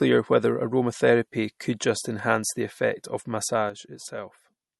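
Speech with plainly audible MP3 compression running the whole way through. Nothing comes through above about 11.8 kHz, so the top end is sliced off flat, and the speech has that watery, swirly quality where quieter detail keeps popping in and out between frames, with sibilants going metallic. The likely cause is an encoder starved of bits, which fits a low rate somewhere around 48 kbps. Then at 3.70 s, right after "enhance the effect of", there's a sudden gain jump. The level drops by about 8 dB in one step and stays down to the end of the clip, with the background noise falling right along with the speech, since both go through the same gain stage. The likely cause is a digital gain setting applied instantly instead of being ramped in, which leaves a hard step rather than a smooth fade.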